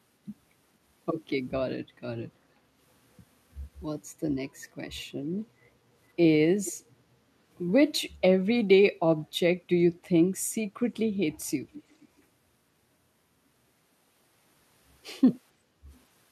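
From 2.59 to 2.73 s the echo canceller clamped the microphone, gating the background: room sound dips by about 6 dB, then returns. From 6.65 to 6.72 s a far-end canceller likely let echo leak through, so a copy of the speech returns about 460 ms late, some 15 dB down. From 11.72 to 12.22 s it comes back fainter, about 25 dB down at a 466 ms delay. From 15.54 to 15.87 s gating recurs, with the background sinking about 8 dB for roughly a third of a second.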